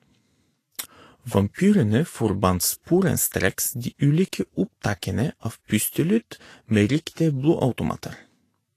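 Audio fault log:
Throughout: Vorbis compression. The treble carries a hissy, grainy texture, consonants and onsets sound smeared, and nothing is present above 14.2 kHz. The likely cause is lossy Vorbis coding at a low setting, which fits a bitrate around 34 kbps. Such an encoder keeps a smooth outline of the spectrum but quantises the upper bands so coarsely that fine speech detail is swapped for noise of similar energy, and it cuts off the top band entirely.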